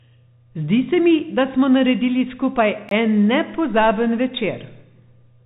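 Bluetooth CVSD headset codec throughout this speech: nothing above 3.8 kHz survives, and the one-bit delta coding, consistent with a 64 kbit/s headset link, can't keep up with loud, bright passages, so s sounds turn scratchy and a granular hiss sits under everything. A block of digital silence runs from 2.89 to 2.91 s, about 21 ms, which fits a 1024-sample buffer the software didn't fill in time. The signal drops straight to silence and returns without a fade, leaving a brief hole.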